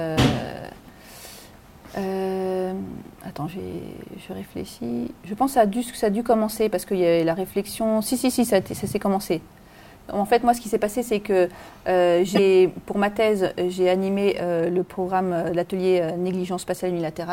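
At 12.32 to 12.39 s, damaged data in the compressed stream makes the decoder lose frame sync, producing a brief chirp, squawk, click or short hole seen as a waveform glitch.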